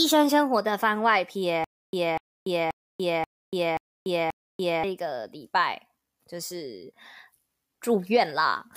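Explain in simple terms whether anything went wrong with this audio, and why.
Between 1.64 and 4.84 s, there's a stutter with silent gaps: a quarter-second speech snippet repeats six times with silence between, likely a stalled stream.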